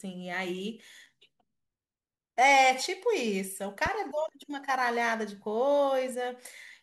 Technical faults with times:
3.86-3.90 loud pop

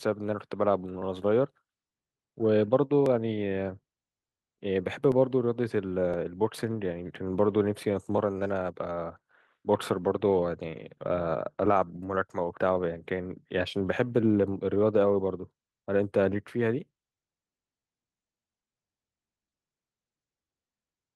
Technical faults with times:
0.00-21.15 clock drift between sender and receiver
0.22-20.97 repeated timing corrections
1.02-8.18 periodic USB or driver dropouts

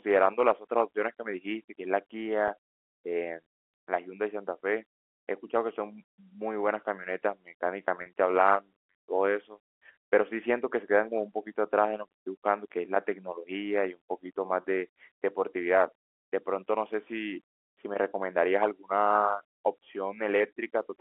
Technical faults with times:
2.48-2.50 packet loss with pitch repetition
8.02-8.06 packet loss with pitch repetition
14.62-14.64 packet loss with pitch repetition

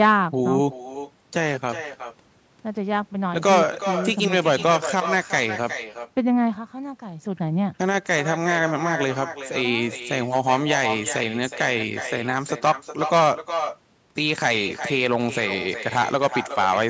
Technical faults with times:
0.00-16.89 echo with no canceller

